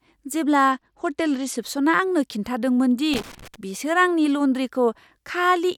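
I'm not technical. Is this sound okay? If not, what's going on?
No, there are two problems. A Bluetooth SBC bit pool drop runs from about 0.72 to 1.58 seconds. The wireless link was struggling, so the phone cut how much detail it sends for each slice of sound to keep the audio from stopping. The highest frequencies get almost nothing and everything else is stored more roughly. During that stretch the speech sounds dull and muffled, with a gritty, grainy edge, until the link recovers.

Loose connector crackle comes in from about 3.14 to 3.56 seconds. A worn or dirty contact in a plug or socket is briefly touching and losing contact many times in a row as it shifts. Each break chops the signal, and the result is a short, uneven burst of crackling and scratching over the speech. Reseating or cleaning the plug, or replacing the cable, usually stops this kind of noise.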